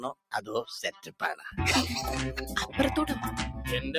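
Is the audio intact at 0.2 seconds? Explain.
No. At 0.2 s the sound falls inside a stretch from 0.0 to 0.49 s where it is cut by the noise suppressor. The suppressor, built for speech, judged this sound to be noise and pulled it down by as much as about 20 dB, for around 200 ms in total across that half-second. The sound seems to sink or lose its decay while any sharp onset slips through. On a waveform the envelope collapses abruptly rather than tapering, and a spectrogram shows the sustained energy thinning or blanking out in patches.

The same speech-oriented noise suppressor is also working on the non-speech material throughout the clip. It keeps turning held and ambient parts down, with a gain swing of roughly 5 dB, so the sound pumps and thins. This appears as a rippling amplitude envelope and tails that fade faster than expected on the spectrogram.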